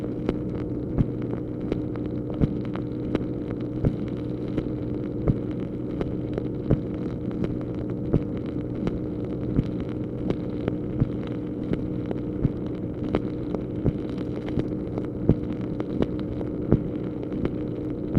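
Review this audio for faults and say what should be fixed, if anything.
DAB burbling occurs at 10.28 s. A few brief watery blips cut across the sound. Weak reception let a few bit errors slip past error correction. Corrupted samples put short blips of noise into single sub-bands, which points to a handful of damaged frames.

Improve antenna placement or signal strength so errors stay within what the correction can repair.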